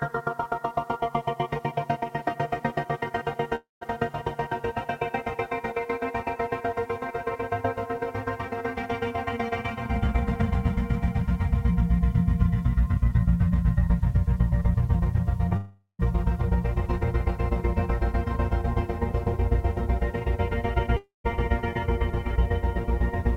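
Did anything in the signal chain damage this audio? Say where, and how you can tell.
Yes. A grainy distortion runs through the whole clip. It tracks the signal, roughening quiet passages and breaking up the softest sound into rough steps, with the error sitting around 40 dB below the signal. At the sample-format conversion stage, the likely cause is low bit depth without dither: the samples appear truncated to about 9 bits, so the rounding error is tied to the waveform instead of being spread out as a smooth, steady hiss.

At 3.55 to 3.83 s, 15.57 to 16.01 s and 20.97 to 21.26 s, the last sound carries on as a fading buzz, falls silent for roughly 0.13 to 0.16 s, and then picks up further along with a piece gone. This points to a long network dropout as the likely cause. About 0.26, 0.42 and 0.28 s of audio failed to arrive, and the receiver's extrapolation ran out before the stream returned.

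At 15.49 to 15.52 s, just before the second gap, there is a brief smear where a short sliver of the sound is replaced. This is short concealed packet loss at the network and decoder stage. About 20 ms of audio was missing, and the decoder bridged it by continuing the preceding sound for roughly 14 ms before blending back into the real signal. That leaves a momentary blur rather than an audible hole.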